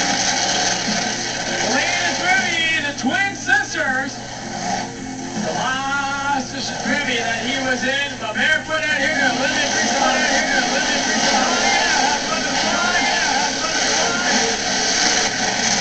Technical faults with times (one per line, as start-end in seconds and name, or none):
9.90-15.28 doubled audio track